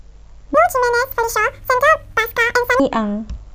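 Audio read two samples at a time (double speed), from 0.54 to 2.80 s: the reader treats each pair of samples as a single frame, so the speech plays twice as fast and a full octave, 12 semitones, higher.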